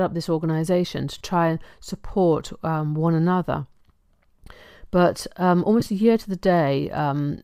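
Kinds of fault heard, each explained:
lost LE Audio frames: at 1.18 s and 5.80 s, about 30 ms of Bluetooth audio drops and the decoder patches each gap with a brief noisy smear.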